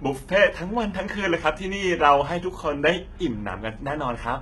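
A speech clip with heavy HE-AAC compression throughout: the treble stays bright but sounds copied and lispy, likely from band replication at a bitrate near 16 kbps, unlike a plain dull low-pass.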